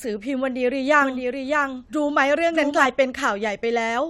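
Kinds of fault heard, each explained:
Doubled audio track: from 1.02 to 2.86 s a second copy of the speech runs roughly 0.7 s behind the original, around 5 dB quieter, full-band and dry, cutting in and out abruptly; likely a second capture path or misaligned edit holding two copies.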